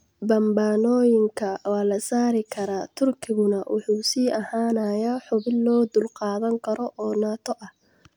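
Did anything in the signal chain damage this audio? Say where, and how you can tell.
Yes. The damage sits at the converter, as sample clock jitter, and it runs through the whole speech clip. A faint hiss or roughness rides on the sound, rising with louder passages and brighter, high-frequency content, and it disappears in the pauses. That tracking points to timing error, not added noise. The clock wanders by roughly a microsecond, so samples land early or late. Steep waveform slopes turn that into error, sitting about 45 dB below the signal.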